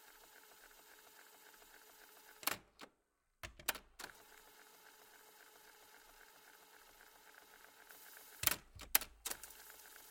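From 7.90 s to the end of the clip, pre-emphasis was left on: the treble boost applied ahead of recording never got its matching de-emphasis cut. The top end stands about 8 dB above 1 kHz at 10 kHz, which fits the CD 50/15 µs curve, so the sound turns thin, bright and hissy.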